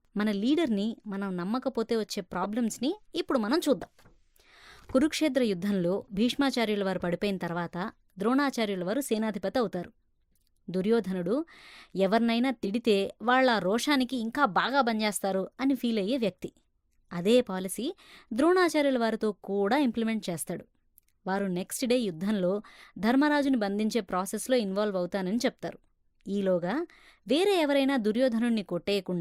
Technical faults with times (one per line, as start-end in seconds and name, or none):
2.43-2.46 corrupt frame decoded
3.81-3.88 corrupt frame decoded
10.32-10.38 corrupt frame decoded
12.63-12.70 corrupt frame decoded